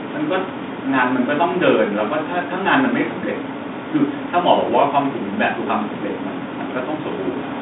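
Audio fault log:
No faults are audible anywhere in this recording.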